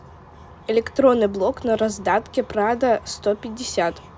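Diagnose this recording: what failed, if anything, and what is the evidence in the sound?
Nothing failed, and no stage of the chain from capture to playback leaves any audible trace on the speech.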